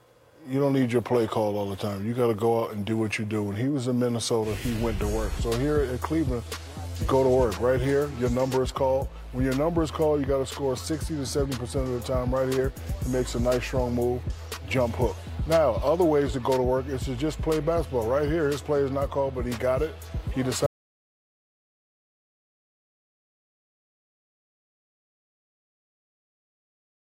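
The audio drops out to silence at 20.66 s and never returns, leaving 6.4 s of dead silence to the end with no room tone underneath. The abrupt cut points to a likely lost input, such as a disconnected device or mute, while recording continued.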